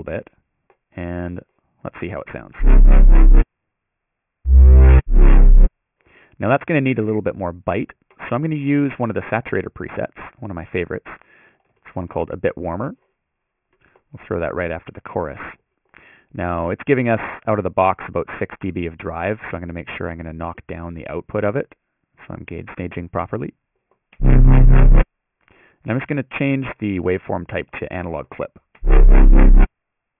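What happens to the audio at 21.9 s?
Aliasing runs through 21.9 s, as it does across the whole clip. The audio was downsampled without an anti-aliasing filter, which fits a drop from 48 kHz to 6 kHz, so content above 3 kHz folds back into unrelated lower frequencies, roughly 25 dB below the signal. The result sounds gritty and metallic, with the spectrum packed hard up to the 3 kHz band edge.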